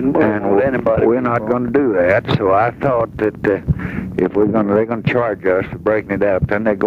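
Gain pumping runs through the whole clip, with the level swinging around 10 dB. The likely cause is input gain set far too high, with a fast limiter repeatedly clamping it down, leaving the sound squashed and flattened.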